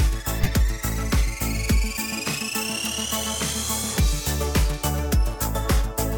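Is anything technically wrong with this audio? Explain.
Yes. Two short bursts of corrupt frame decoded damage stand out. From 0.43 to 0.50 s there is a loud, harsh glitch, peaking around -5 dBFS. A quieter, briefer glitch follows from 3.21 to 3.26 s. Both are short glitches of misplaced energy. The cause is bit errors inside compressed frames that the decoder played back anyway. Scrambled gains and codes put energy at the wrong frequencies, a few frames' worth in the first event and a couple in the second.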